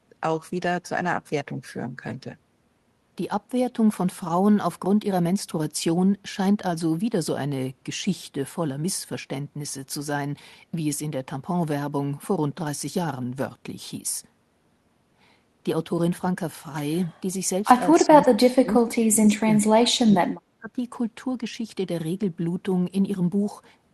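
Speech carried over a call path whose Opus-style coding shows as a top end that stops near 12 kHz. From 17.98 to 20.33 s the talker's level sinks, for about two seconds in total, at worst roughly 30 dB down. A shorter dip of about 20 dB follows from 20.59 to 20.78 s. The likely cause is speech suppressed in double talk: with both ends speaking, the echo canceller treated this talker as loudspeaker echo and attenuated it.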